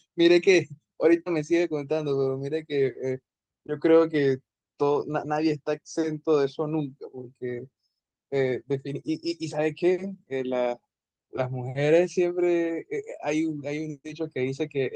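No faults can be heard anywhere in the recording.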